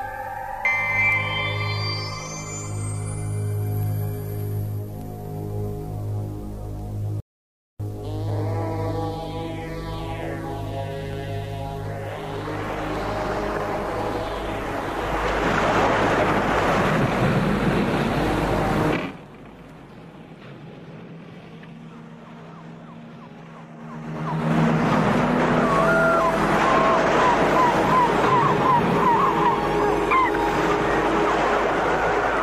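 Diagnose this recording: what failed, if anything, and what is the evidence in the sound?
The playback buffer ran dry during streaming, producing a rebuffering stall. At 7.20 s the audio drops to silence and picks up again at 7.80 s, continuing exactly from the point where it stopped. That gap of about 0.59 s is pure added time. Nothing is skipped or repeated, which shows the player paused while waiting for data to arrive over the network instead of discarding anything.

Zipper noise comes from a gain control in the playback path that moves the level in coarse 3 dB jumps with no smoothing between them. From 18.89 to 19.24 s the level falls by roughly 20 dB at around twenty steps a second. From 23.75 to 24.58 s it rises by a similar amount at around ten steps a second. Each abrupt jump leaves a small click, so a ticking, zipping texture rides on the sound while the level moves.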